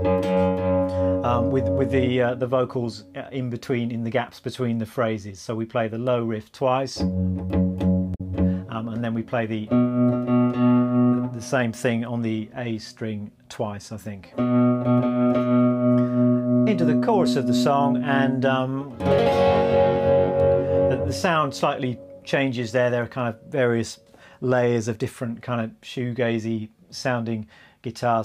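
From 8.11 to 8.21 s, damaged data in a compressed stream breaks the sound for about 95 ms. The decoder misreads the corrupted frames, loses sync and hunts for the next header. Unlike an electrical click, the disturbance spans whole coded frames rather than a single instant.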